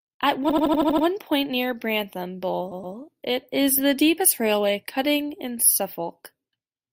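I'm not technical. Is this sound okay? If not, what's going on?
No. The speech stutters twice. From 0.49 to 1.05 s, just before "point near", a tiny 80 ms snippet plays over and over, seven extra times. From 2.71 to 2.95 s, before "it is the deepest", a 120 ms piece plays twice more. These are repeated frames: chunks of the compressed audio were saved or sent more than once, so the player replays them and the clip runs longer.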